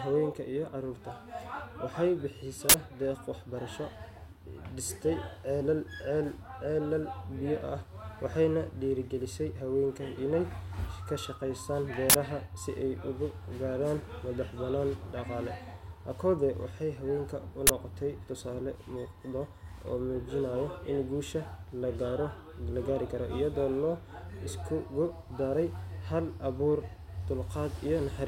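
Uninitialised buffer bursts of loud digital noise at 2.69–2.74 s, 12.10–12.14 s and 17.67–17.69 s play leftover memory as samples; the lengths fit 2048- and 1024-sample buffers.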